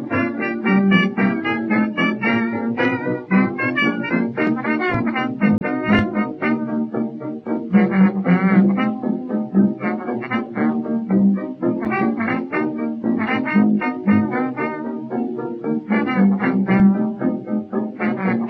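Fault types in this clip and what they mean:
MP3 compression: The whole clip sounds watery and swirly, with smeared attacks, most likely from MP3 encoding at a low rate that fits about 64 kbps. A spectrogram would show the treble cut off flat at a fixed frequency, and speckled high-band energy flickering on and off between frames.
Damaged data in a compressed stream: Two short blips sound where the decoder misread corrupted frames and resynchronised, from 5.58 to 5.62 s and from 11.82 to 11.87 s. Each shows as a brief broadband smear or discontinuity in the spectrogram, with an abrupt step in the waveform.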